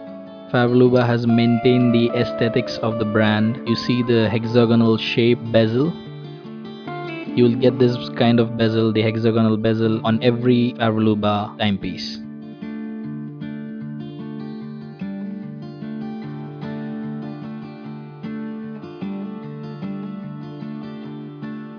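No technical faults can be heard at any point in the recording; the signal stays continuous and steady throughout.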